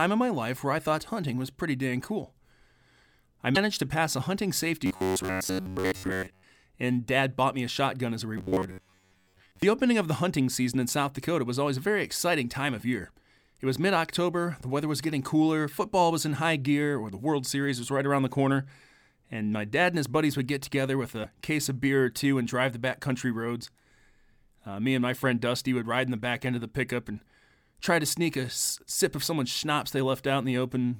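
At 3.54 to 3.57 s, just before "to pass a hunting", the speech jumps ahead with a brief glitch. This is a broken MP3 bit reservoir. The likely cause is a cut in the stream. The next frame then looked back for borrowed data and decoded bytes from another frame. The glitch spans about one 26.1 ms frame.

From 4.86 to 6.43 s the speech turns into a rigid, metallic buzz. This is robotic sound from repeated short buffers. It likely comes from audio arriving too seldom. Playback loops a segment of about 10.7 ms, which imposes a fixed buzz near 93.8 Hz. Most of the real audio in the span is skipped.

The same buzz returns from 8.38 to 9.62 s, after "a shotgun as a" and before "opening of the hunting". It holds the same 93.8 Hz buzz rate.

At 21.23 to 21.26 s, after "would get together with" and before "case of beer or", the broken MP3 bit reservoir recurs. It is another short glitch and forward jump lasting about one frame.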